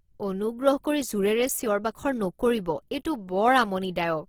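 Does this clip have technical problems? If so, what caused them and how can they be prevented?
Yes. Throughout, the speech sounds grainy and rough rather than swirly, so it is not MP3. The fullband content reaching 20.2 kHz points to likely Opus compression at a low rate near 16 kbps. Encoding at a higher bitrate prevents it.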